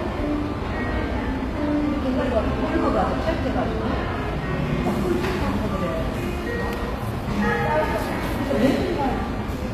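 HE-AAC compression damage runs through the whole clip and is plainly audible. The top of the spectrum has a gritty, metallic sheen that doesn't match the body of the sound beneath it. This is likely HE-AAC at a low bitrate, which fits something around 24 kbps. The codec keeps only the lower band and fills the treble by copying lower bands upward under a coarse envelope, so the upper harmonics fall out of step across the crossover.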